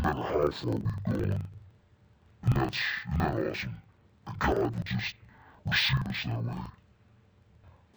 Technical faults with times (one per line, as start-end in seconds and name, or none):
0.00-7.96 interleaved audio read as planar